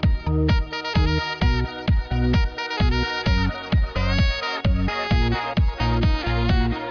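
No technical faults can be heard anywhere in the signal, with nothing breaking into it.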